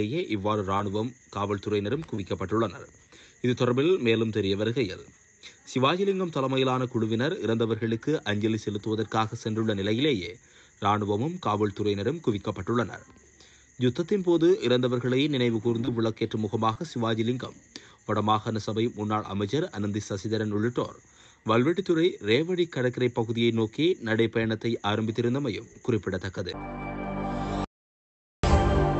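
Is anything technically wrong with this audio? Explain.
Yes, there are two kinds of trouble, both typical of audio that came over a call.

Short concealed packet loss hits at 0.77, 2.15, 15.85 and 16.73 s. Each time about 20 ms of audio didn't arrive in time, so the receiver stretched the preceding sound to cover the hole and then blended back in. You hear a quick smear or wobble.

The audio dropout to silence runs from 27.64 to 28.44 s, roughly 0.79 s of silence with no room tone at all. It cuts off mid-flow and then resumes. That's likely the input going missing, say a device or link hiccup, while silence kept being written.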